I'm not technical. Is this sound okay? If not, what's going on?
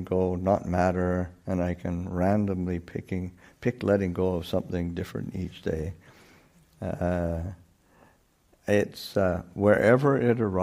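Yes, nothing stood out as a problem when listening to this.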